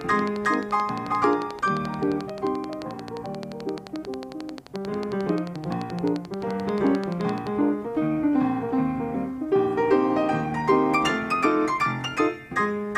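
A regular train of clicks runs from 0.01 s to 7.48 s, about a hundred near-identical pulses at 11.4 per second, peaking well above the surrounding audio and audible through quiet passages. The steady ticking likely comes from electrical interference or a faulty connection or power supply.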